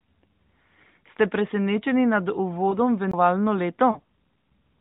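At 2.70 to 2.75 s, just after "presenečeni nad", there are lost AMR speech frames. Radio errors made a frame fail its checksum, so the decoder filled the gap by reusing the last good pitch and vocal-tract settings at falling gain. The gap is about 20 ms, which fits a single lost frame, and is heard as a brief dip or warble before the voice returns rough for a moment. On a spectrogram the harmonics smear flat and fade for one frame's width below the 4 kHz ceiling of the narrowband mobile codec.

At 3.11 to 3.14 s a CD skip occurs. The laser jumped to a different turn of the disc's spiral, so playback mutes for about 20 ms and resumes from another point. It is heard as a tick and an abrupt discontinuity in the speech. The waveform shows a short near-silent gap with a hard edge on either side. On the spectrogram this appears as a thin vertical click line and a sudden change in harmonic pattern rather than a smooth glide.

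At 3.91 to 3.99 s, lost AMR speech frames recur, with about 40 ms missing, which fits two consecutive lost frames. The concealment holds the previous pitch for longer, so the sound is drawn out and sags in level before the decoder recovers. It is briefly weak and rough as it comes back. On the spectrogram the harmonics stretch horizontally and dim across the gap, and the waveform envelope tapers, then rebuilds.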